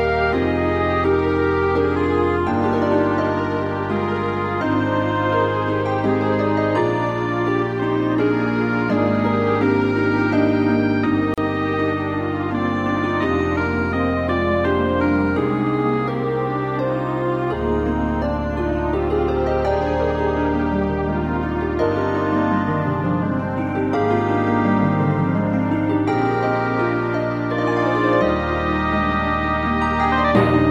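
At 11.34 s the sound drops out until 11.38 s. This is a gap at a join of encoded pieces, about 37 ms long. Two separately encoded sections were joined untrimmed, leaving encoder padding. The silence has smeared edges, then the sound resumes where it stopped.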